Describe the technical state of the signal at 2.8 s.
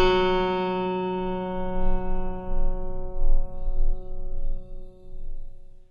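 At 2.8 s the music carries HE-AAC compression damage, present throughout. The treble is likely rebuilt by copying lower bands upward, so it sounds gritty and metallic, with nothing above 11.8 kHz.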